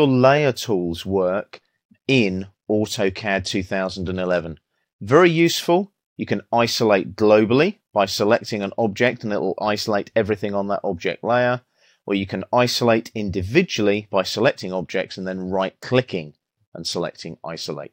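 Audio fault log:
1.54–5.45 s, 8.19–9.16 s and 14.32–17.83 s: Bluetooth SBC bit pool drop. Three times the treble dulls and a gritty noise rises, then clears. The link seems congested, so the encoder cuts its bit budget. The sound fits a fall from a bit pool of 31 to about 13, near 94 kbps. The top sub-bands get almost no bits. The rest are coarsely quantised, which causes the grit. Quality returns when the rate recovers.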